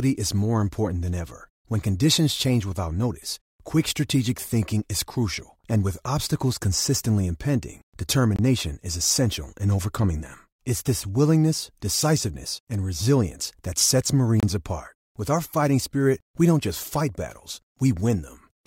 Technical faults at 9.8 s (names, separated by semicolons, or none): none